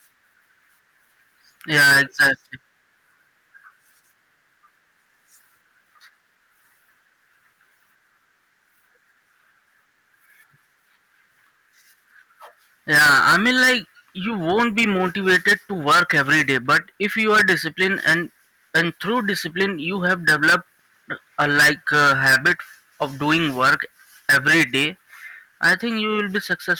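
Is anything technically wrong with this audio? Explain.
Yes. Hard clipping runs throughout: the speech is driven about 20 dB past the limit, flattening around one sample in twenty into square tops that add harsh high harmonics, heard as fuzz on every loud syllable.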